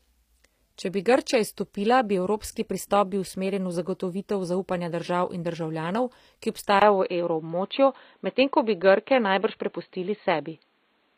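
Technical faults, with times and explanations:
Throughout, HE-AAC compression: sibilants sound gritty and metallic, with nothing above 15.5 kHz, which fits a low bitrate around 24 kbps. The treble is likely rebuilt by band replication, copying lower bands upward, so its harmonics no longer match the real ones.
6.80 to 11.17 s, input switched to a poorer device: after a 20 ms gap the sound turns dull and boxy, cut off above 4.4 kHz, with a modest level change and a new noise floor well below the signal. This likely comes from the recording moving to a narrower-band microphone or headset.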